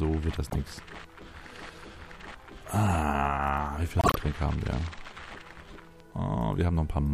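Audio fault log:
0.50–0.55, 1.71–1.77, 3.99–4.16, 5.69–5.72 s: corrupt frame decoded. Damaged compressed frames played anyway put energy at the wrong frequencies, so you hear frame-length chirps or noise bursts. They are loud at 0.50 and 3.99 s and faint elsewhere.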